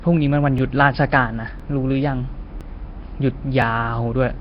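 A speech recording whose whole length has a rough, hissy halo and a smeared, underwater quality, with nothing above 5.3 kHz. This heavy damage is likely Nellymoser compression at a low bitrate near 22 kbps. On a spectrogram, the band above that cut-off is empty, and below it, patchy noise fills the gaps between speech harmonics. Overlapping chunks cause short stutters at 0.58, 1.60, 2.61 and 3.62 s, one every second. At each join, about 12 ms of audio plays twice because each one-second chunk begins before the previous one has finished. On the waveform, each join shows a brief repeated stretch with a discontinuity.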